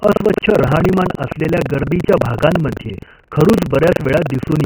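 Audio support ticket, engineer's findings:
Buffer tearing, whole clip. Robotic buzz on the speech at about 23.4 Hz, gone in pauses where only faint room noise remains, about 50 dB down. Rate fits a 2048-sample buffer. App writer and hardware reader have drifted and cross mid-period. Roughly a fifth of each buffer replays audio about 100 ms old. Hard joins both sides of that section cause the rattle.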